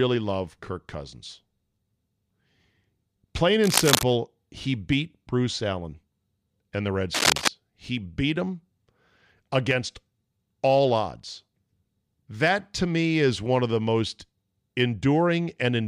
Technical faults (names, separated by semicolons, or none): cable scratch noise